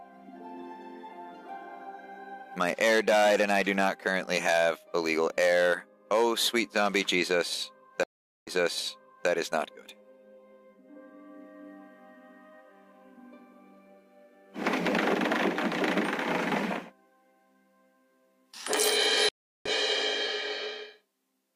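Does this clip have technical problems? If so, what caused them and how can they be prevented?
Yes. Stream reconnects occur at 8.03–9.29 s and 19.29–19.70 s. The connection dropped and a fresh decoder restarted mid-stream. First, 434 ms of silence, then audio resumes 820 ms earlier. Second, 366 ms of silence, then a jump roughly 0.3 s ahead. A larger receive buffer and position-aware reconnection would prevent this.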